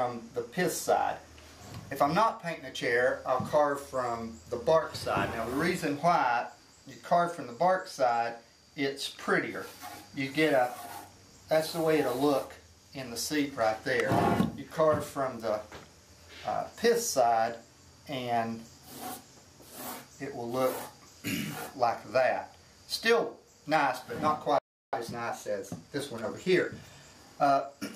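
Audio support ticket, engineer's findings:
Playback stall, 24.59–24.93 s, about 344 ms. Player output path likely starved of buffered data or its output thread blocked, so nothing reached the output. The sound cuts out mid-flow for roughly a third of a second, then resumes.

Time-compressed catch-up, 24.93–27.85 s, straight after the stall. Player drains its accumulated backlog by dropping short segments and cross-fading across the joins. The audio plays back hurried at 1.1x speed, pitch unchanged, for nearly 3 seconds.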